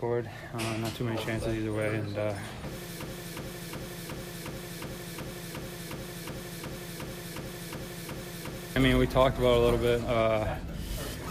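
From 3.02 s to 8.76 s the audio falls into a broken-record loop: a 0.36 s fragment repeats exactly, back to back, about 16 times. The likely cause is a stalled player, encoder or stream re-sending its last held fragment, so the intended audio there is lost.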